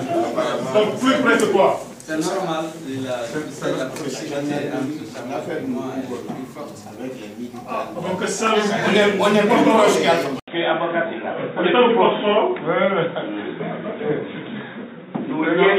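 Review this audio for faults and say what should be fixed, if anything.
At 10.40 s the sound drops out for about 80 ms, then comes back duller and boxier through to the end at 15.8 s. Nothing above 3.8 kHz survives, and a new background noise sits well below the signal, with no real jump in loudness. That's the signature of an input switched to a poorer device, likely a fallback to another mic or a headset's call profile. Lock the recording input to one device and turn off automatic device switching before recording.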